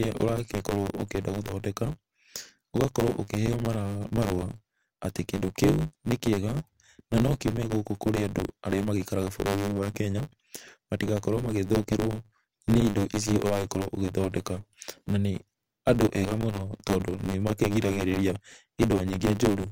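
Throughout the clip, the speech carries a steady buzz at 100 Hz and runs about 1.16 times fast while keeping its timbre. This is a truncated block size mismatch: each block, which fits a 512-sample size, loses its tail before the next stage reads it.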